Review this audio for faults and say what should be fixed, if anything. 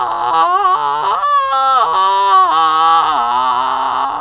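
Nothing stood out on listening to this music, so there is nothing here that needs fixing.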